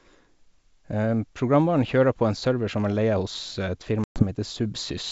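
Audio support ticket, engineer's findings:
Packet loss on an ADPCM call, 4.04–4.24 s. Abrupt silent gap, roughly 120 ms of speech missing, several packets' worth. The decoder's predictor and step size lose sync with the sender, so speech re-enters with brief distortion.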